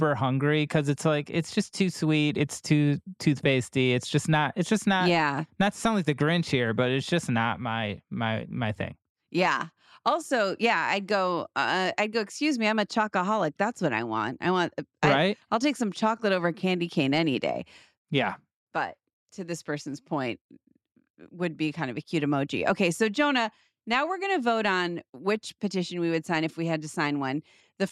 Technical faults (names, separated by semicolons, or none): none